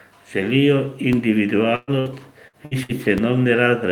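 At 1.13 s a DC step abruptly shifts the waveform's zero line, heard as a low thump. The offset then drains away slowly, as through a 2 Hz high-pass, while the speech continues unaffected. From 1.75 to 1.90 s a burst of packet loss drops about 120 ms of speech. The receiver stretches the last sound into a fading buzz or hiss before the audio resumes further along. Shorter bursts, each losing about 60 ms, follow at 1.99, 2.48, 2.65 and 2.83 s. A second DC step at 3.18 s gives another thump and slow decay.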